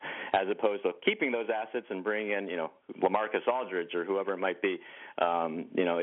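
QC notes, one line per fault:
No faults heard in this clip.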